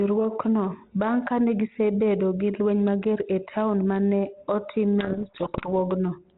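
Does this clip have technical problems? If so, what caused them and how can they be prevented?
Yes. From 5.0 to 5.69 s there is a codec payload misread. The sender and receiver disagree on the bit order of the G.726 code words, so the decoder takes each packed value with its bits reversed and rebuilds the wrong prediction differences. The speech in that stretch disappears under harsh, grinding distortion. Before and after, the 32 kbit/s G.726 path carries the speech with only light coding damage and the usual telephone bandwidth. To prevent this, both ends should negotiate and use the same G.726 packing order.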